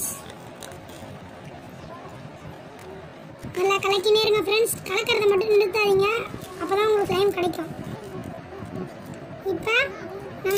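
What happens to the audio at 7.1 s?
At 7.06 s the audio jumps abruptly forward, and about a tenth of a second of material is simply missing. There is no gap of silence; the sound on either side of the cut is butted together, so the continuity breaks at a single point. This is most likely a dropped buffer (overrun): the capture software failed to read a block of samples before the hardware overwrote it, so that block was lost and the stream resumed from the next one.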